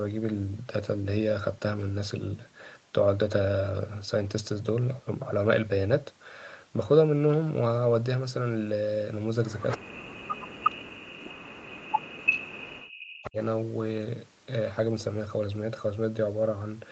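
Speech, band-limited at 8 kHz by the call path, with two kinds of fault. An echo leak appears in brief scraps at 9.69 to 9.78 s, 10.64 to 10.71 s and 12.32 to 12.39 s, a copy of far-end speech arriving about 339 ms late. The first is about 10 dB under the speech and the later two are at roughly the same level. This is likely a loudspeaker echo the canceller failed to remove, visible as short bursts echoing earlier spectrogram patterns. Speech suppressed in double talk then dips the voice from 9.77 to 11.43 s and from 11.67 to 13.37 s, about 1.5 s each, by as much as about 40 dB. The likely cause is the canceller mistaking overlapping talk for echo. On the waveform the envelope collapses abruptly, and the spectrogram shows gaps and thinned upper harmonics.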